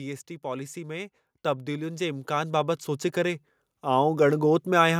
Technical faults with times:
0.41-4.52 automatic gain rising

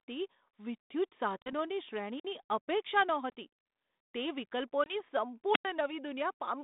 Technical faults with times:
1.42-1.53 packet loss on an ADPCM call
2.16-2.25 wireless microphone squelch dropout
3.30-3.33 packet loss on an ADPCM call
4.84-5.00 packet loss on an ADPCM call
5.52-5.65 wireless microphone squelch dropout

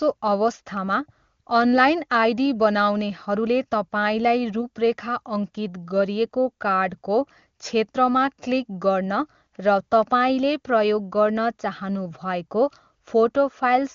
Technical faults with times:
none

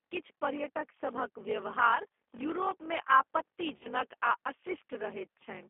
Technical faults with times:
0.00-5.70 block size mismatch (padded)
0.00-5.70 G.729 codec
3.77-3.88 VoIP packet loss concealed by the speech codec

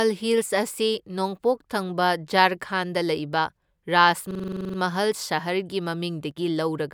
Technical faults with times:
4.31-4.78 system hang loop
6.31-6.36 one channel drops out

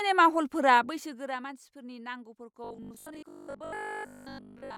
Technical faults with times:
0.71-1.53 zipper noise
2.64-4.76 robotic sound from repeated short buffers

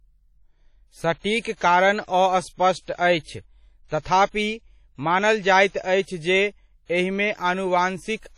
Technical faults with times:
0.00-8.37 WMA compression
1.41-1.45 pre-echo
2.04-2.08 pre-echo

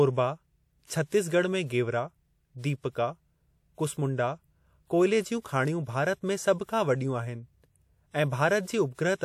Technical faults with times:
0.86-0.90 pre-echo

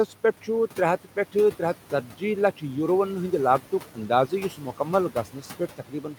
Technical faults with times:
0.00-6.18 noise suppressor artifacts
2.03-2.22 speech cut by the noise suppressor
3.60-6.18 speech cut by the noise suppressor

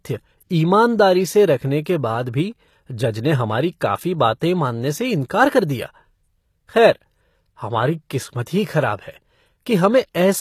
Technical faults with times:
0.00-10.40 HE-AAC compression
4.40 pre-echo

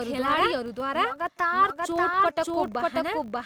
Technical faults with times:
0.00-3.46 doubled audio track
0.00-3.46 filter restarted on every block

